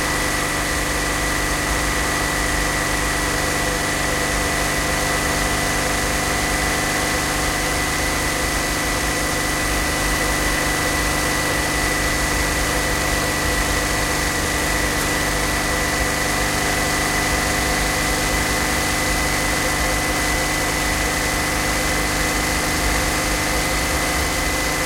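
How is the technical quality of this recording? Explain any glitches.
Nothing here gives any trouble: the sound runs along steadily, with no glitches anywhere to point to.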